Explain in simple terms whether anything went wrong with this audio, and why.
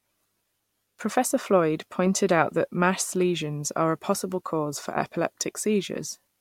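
Nothing went wrong; no faults can be heard.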